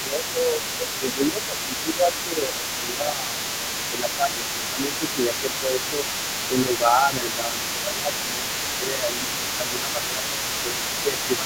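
From the start of the clip to 6.12 s, the talker's speech repeatedly dips in level, by around 10 dB at its deepest, across roughly five seconds of that span. This is speech suppressed in double talk: the echo canceller was likely unable to tell the local talker apart from the loudspeaker echo while both sides spoke, so it attenuated the microphone signal as a whole, pulling the wanted speech down along with the echo.

Running underneath for the entire clip, from 0.0 s to the end, is the other side's voice leaking through, sitting at about 10 dB below the talker. The far-end audio played on the talker's loudspeaker was likely picked up by the microphone and only partly cancelled, so a second, quieter voice remains audible behind the main speech instead of being removed.

After a short gap, the same speech suppression in double talk returns from 6.48 s to the end, again dropping the talker by around 10 dB at worst, over roughly four seconds in total. 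The pattern matches the first section, with the level sagging and recovering while the leaked far-end voice continues in the background.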